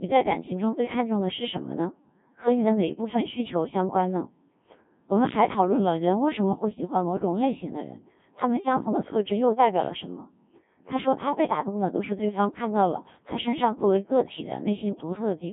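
Throughout, a Codec 2 vocoder resynthesises the speech from pitch, voicing, energy and envelope alone, fitting roughly 1.3 kbit/s, leaving it robotic and buzzy, with nothing above 3.6 kHz.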